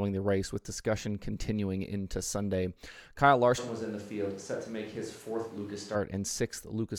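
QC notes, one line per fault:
3.60–5.94 s, switch to a distant microphone: the speech suddenly turns roomy and hollow, thinner in the low end, drops by roughly 5 dB and sits over a louder room-noise bed only about 25 dB below it. At 5.94 s it snaps back to the close, full sound. The likely cause is that the close microphone's feed dropped out and a farther mic covered the gap, capturing more reflections and less bass.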